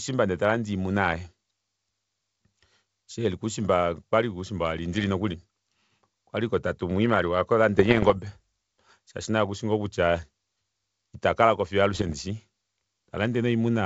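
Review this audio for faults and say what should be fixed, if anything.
Bit errors on an ADPCM link occur at 4.94 to 5.06 s, 7.76 to 8.19 s and 11.94 to 12.15 s. The speech breaks into pops and rough, gritty bursts with brief jumps in level, the longest at around 8 s. Each flipped bit corrupts the decoder's step size and predictor, so one error keeps ringing for several milliseconds. The density suggests a bit error rate a little under one percent, on a G.722 stream whose 64 kbit/s coding is clean between bursts. Protecting the link with error detection and concealment, or improving the radio path, would prevent it.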